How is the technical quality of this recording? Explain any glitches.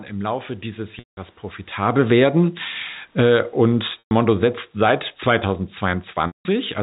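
The recording has two kinds of fault: brief dropouts where the sound stalls and fades, and two stretches where the level sinks.

Packet loss with pitch repetition occurs at 0.99 to 1.17 s, 4.00 to 4.11 s and 6.27 to 6.45 s. The sound briefly holds a buzzy, repeated tone, fades to silence, then cross-fades back. Packets went missing (180, 120 and 180 ms), and the receiver looped the last pitch period before fading it out.

Automatic gain falling shows at 1.79 to 2.28 s, where the level drops by about 4 dB, and from 3.05 to 6.78 s, where it sinks by about 7 dB. Speech and the room background quieten together. The gain control judged the input too loud, or its background noise too strong, and gradually turned it down.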